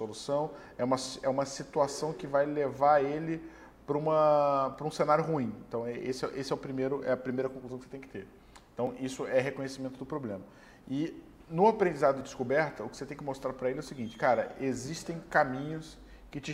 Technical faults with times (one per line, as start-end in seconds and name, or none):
4.74 dropped buffer (overrun)
8.87 dropped buffer (overrun)
12.21 dropped buffer (overrun)